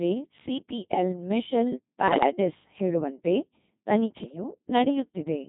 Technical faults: Codec 2 vocoder; bit errors on digital voice radio

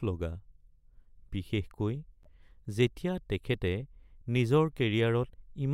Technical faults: corrupt frame decoded

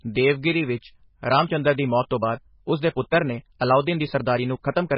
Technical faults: MP3 compression; time-stretched section

